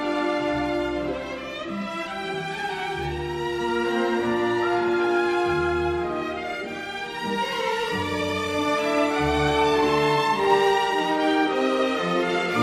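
No faults turn up anywhere in the recording: no dropouts, clicks, distortion or timing errors.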